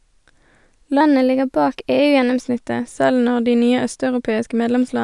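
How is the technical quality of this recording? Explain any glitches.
There is one glitch, a wrong sample rate, from 1.01 s to 2.41 s. For that stretch the speech runs fast and sits higher in pitch. The samples are played back at a faster rate than they were captured, with no conversion between the two. That fits audio recorded at 22 kHz and played at 24 kHz. Speed rises by a factor of 1.09. Pitch climbs by about 1.5 semitones. The voice sounds hurried and slightly chipmunk-like until it snaps back.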